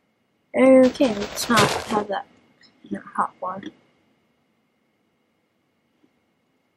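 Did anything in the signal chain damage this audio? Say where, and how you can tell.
No, nothing audible in the clip points to damage at any stage of the signal chain.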